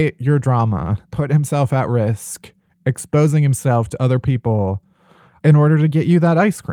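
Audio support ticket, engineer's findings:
Nothing stood out on listening across the speech in this clip.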